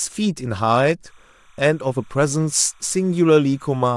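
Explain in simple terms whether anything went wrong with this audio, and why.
From 1.06 s to the end, a faint chirping warble sits behind the speech. This is timecode bleed. Timecode is a signal that helps match sound to video. It switches quickly between two pitches, near 1 kHz and 2 kHz. Here it runs at 29.97 frames per second, a common rate for video. It likely leaked in from a nearby track or cable. It stays quiet, well below the speech, but it never stops.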